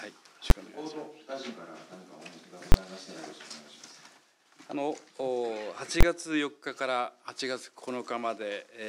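Three very loud bangs, at 0.50 s and from 2.72 to 2.74 s and 6.01 to 6.03 s, come from invalid numbers at full scale. Whole processing blocks were pinned to maximum value, about 11 ms and 21 ms, which fits 512- and 1024-sample blocks. Unlike clipping, which flattens loud peaks, these are sudden solid slabs unrelated to the audio's level.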